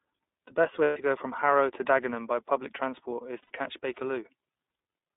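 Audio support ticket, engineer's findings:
iLBC codec, whole clip: speech band-limited to roughly 250 Hz to 3.7 kHz, nothing up top, with a plainly audible rough, slightly synthetic edge. Narrowband iLBC coding each frame's excitation on its own, no carry-over between frames. Sound fits the 30 ms frame, 13.33 kbps mode. Expected with this codec, not a device fault.

Lost iLBC frames, 0.84 to 0.97 s (about 120 ms): speech smears into a held, buzzy vowel-like tone, then snaps back clean. Packet loss; decoder repeating the last pitch cycle mixed with noise. Length points to four 30 ms frames gone.

Lost iLBC frames, 3.43 to 3.52 s (about 90 ms): same held, slightly breathy buzz before recovery. Likely three consecutive frames dropped in transit. Recovery is immediate since iLBC frames stand alone. Check network jitter/loss on the path.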